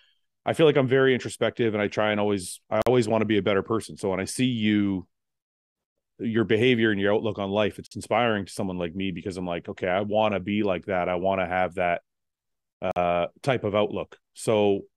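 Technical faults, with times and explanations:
2.82 s, 7.87 s, 12.91 s: gap between chunks. 48 ms silences recur every 5 s, after "try and always I", after "your outlook on life", and before "type of", where chunk joins were likely played with padding or a late start.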